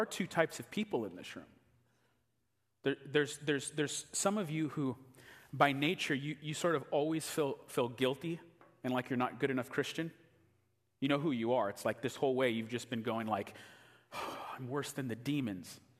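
No technical faults can be heard anywhere in this recording.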